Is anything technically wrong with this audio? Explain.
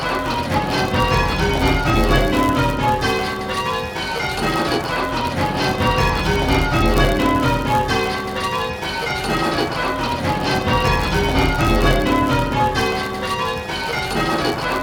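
Yes. A block size mismatch (padded) runs through the whole clip. One stage writes blocks slightly shorter than the next stage reads. The shortfall is filled with zeros, leaving a tiny gap in every block. That gives a buzz at 99.6 Hz. The audio also runs slow, at 0.996 times normal speed, while its timbre stays the same.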